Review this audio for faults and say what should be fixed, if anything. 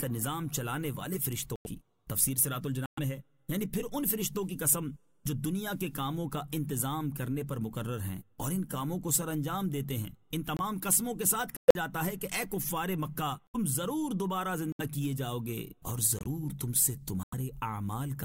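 You've got corrupt frame muted dropouts at 1.56–1.66, 2.86–2.99, 10.57–10.60, 11.57–11.76, 13.47–13.56, 14.66–14.81, 16.19–16.27 and 17.23–17.34 s. Damaged compressed frames got rejected by the decoder and swapped for silence, so the audio cuts out abruptly for 40 to 190 ms while the timeline stays intact. To prevent it, add error detection and retransmission or forward error correction on the transport, or use packet loss concealment instead of muting.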